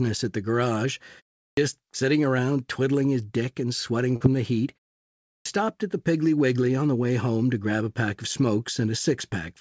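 At 1.43 s, after "at the garage" and a 0.3 s pause, there is a clipped start after a pause. The output device slept through the silence and took about 144 ms to wake, so "sitting around twiddling his" begins abruptly, its opening sound swallowed.

From 4.16 to 4.23 s, between "his dick and sweating" and "the heat", short concealed packet loss replaces about 40 ms of missing audio with a 42 ms fill extrapolated from the preceding sound. It is heard as a brief smear before the decoder blends back into the real signal.

At 5.29 s the clipped start after a pause recurs. Following "the heat" and a 0.59 s gap, about 165 ms is lost while the device relocks, so "stopped at the" starts cut short out of silence. Throughout, the band ends at 8 kHz, which fits the G.722 codec on the call path.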